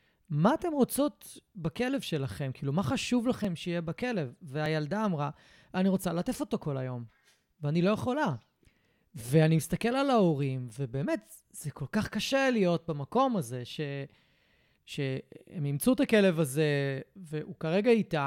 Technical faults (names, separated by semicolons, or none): dropped buffer (overrun)